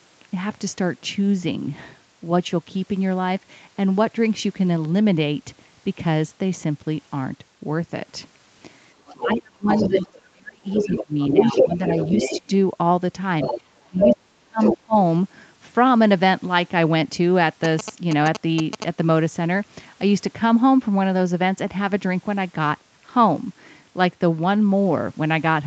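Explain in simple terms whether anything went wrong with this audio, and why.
Several things go wrong in the middle of this speech clip.

From 9.06 to 10.22 s, 10.7 to 12.4 s, 13.41 to 14.17 s and briefly at 14.61 to 14.77 s, a second voice can be heard behind the talker, at times almost as loud as the talker. This is the other side's voice leaking through. The talker's phone or computer was playing the far end on a loudspeaker, and its echo canceller likely failed to scrub all of that sound out of the microphone.

At the same time, the talker's own voice sinks. From 9.21 to 11.91 s it drops in and out for about a second and a half in total, sometimes almost to nothing. It dips again for a moment at 12.36 to 12.52 s, and for about a second between 13.85 and 14.96 s. This is speech suppressed in double talk. Both people were likely speaking at once, and the echo canceller, unable to tell its own talker from the loudspeaker echo, turned everything down together.

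From 17.64 to 18.84 s there is a fast, galloping run of short buzzes. These are GSM signalling bursts. A nearby 2G mobile phone was exchanging brief radio messages with its network, and the audio wiring picked up that radio energy and turned it into sound. The buzzing pulses at about 217 times per second, which is the rhythm of that kind of phone transmission.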